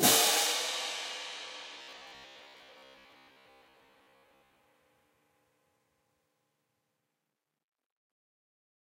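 A recording of everyday sounds that turns rigid and metallic from 1.79 s to 4.61 s, locked to a steady buzz near 66.7 Hz. This robotic sound from repeated short buffers likely comes from roughly 15 ms chunks being replayed for most of that stretch while fresh audio was skipped.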